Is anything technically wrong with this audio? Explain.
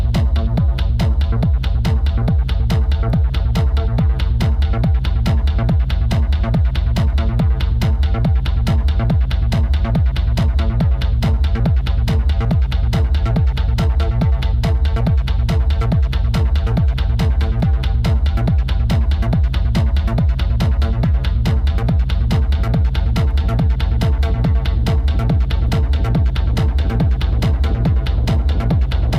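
No, nothing technical stands out here, so there's nothing to flag.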